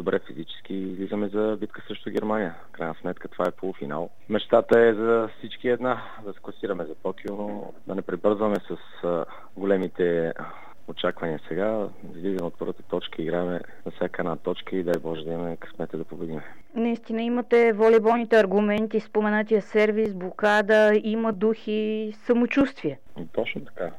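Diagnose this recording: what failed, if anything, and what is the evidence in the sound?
A regular click recurs every 1.28 s from 0.90 s to 23.89 s, around twenty in all. This is likely clock drift buffer slips at the driver or buffer stage. Two unsynchronised clocks, mismatched by roughly 1000 ppm, force the buffer to drop or repeat about fifty samples each time.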